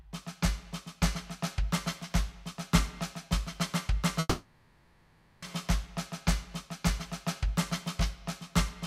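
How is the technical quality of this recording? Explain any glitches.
The music has one glitch, a call audio freeze from 4.19 to 5.44 s. The last sound stretches into a fading buzz or hiss for about 1.2 s, likely because packets stalled and the jitter buffer emptied. Unlike a dropout, the music then resumes exactly where it paused, so nothing is skipped.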